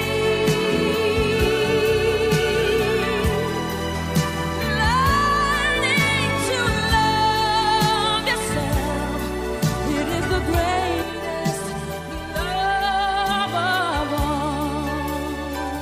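Channel delay (comb filtering) appears from 11.02 to 13.47 s. One channel arrives roughly 5 ms behind the other, and when the pair is folded to mono, content common to both cancels at evenly spaced frequencies. The first notch falls near 100 Hz, with further dips repeating up the spectrum. For those two and a half seconds the sound turns hollow and phasey, its body thinned by fixed notches.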